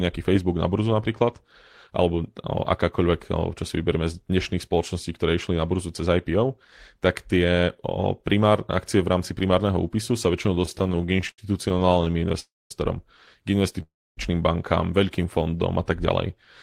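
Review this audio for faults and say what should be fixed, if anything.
Repeated stalls (stutter), 10.54 to 12.35 s, just after "primárneho úpisu sa väčšinou": packets arrived late, so the buffer kept emptying and the receiver stretched sound across many brief gaps, the longest about 77 ms.

Call audio freeze, 12.40 to 12.71 s and 13.82 to 14.18 s, the second just before "bankám veľkým": the sound fades into silence for roughly a quarter second each time, then resumes. The likely cause is packets held up in transit, leaving the jitter buffer empty.

Jitter buffer slow-down, 15.38 to 15.86 s, after "bankám veľkým": the receiver repeated pitch periods to rebuild its reserve, so the audio runs at 91% speed with unchanged pitch, adding 51 ms.

To prevent these, reduce network jitter and congestion on the path and give the jitter buffer a larger or more stable target delay.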